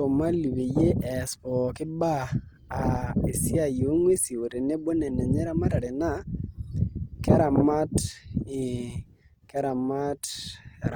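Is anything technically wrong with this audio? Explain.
Yes. Throughout, the speech sounds grainy and rough, likely from Opus compression in music mode. Starved bands get refilled with folded spectrum or noise, which fits a bitrate near 24 kbps.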